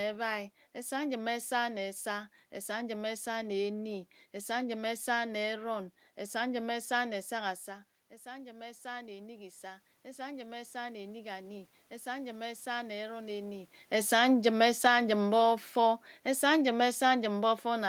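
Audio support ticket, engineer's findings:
Automatic gain rising, 7.65–13.77 s: voice and room noise swell together by about 9 dB after input drops about 14 dB near 7.5 s. Shared background rise marks AGC, not talker movement.

Automatic gain falling, 13.92 s to end: level starts loud after talker moves around 13.5 s, then sinks gradually with the room noise. Background sinking with voice points to AGC gain reduction.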